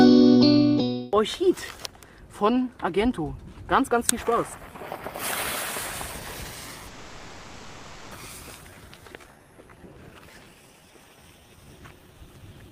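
At 6.87 s the sound locks onto its last moment and carries it on as a buzzing, hiss-like continuation that fades without reaching silence, until normal audio resumes at 8.14 s. This is a call audio freeze. About 1.24 s of substitute sound fills the wait, and nothing is lost when playback picks up from where it stopped. The likely cause is packets held up in transit, leaving the jitter buffer empty and the receiver stretching the last audio it had.

Between 8.63 and 8.67 s the audio jumps forward, joined across a gap of only about 10 ms. This is a skip ahead. Roughly 0.7 s of audio never plays, so the material on either side of the join sits almost directly together. The delay built up during the freeze was cut by dropping a stretch of audio that was already waiting, rather than by playing it out.

From 8.70 s to 12.70 s the audio drags at about 87% of normal speed while keeping its pitch, and sounds come out drawn-out. 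This is a jitter buffer slow-down. Running short on reserve right after the jump, the receiver repeated single pitch periods and fragments of pauses over and over, adding about 523 ms in total to rebuild its buffered margin.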